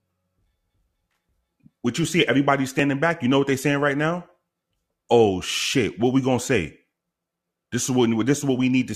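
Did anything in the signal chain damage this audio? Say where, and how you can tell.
Yes. At 2.79 s, right after "you see everybody", the speech has a tiny skip: an overlap between stream segments at the playback stage. Where two segment timestamps overlapped, the player trimmed the overlap from audio that wasn't duplicated, removing a few milliseconds and leaving a waveform jump.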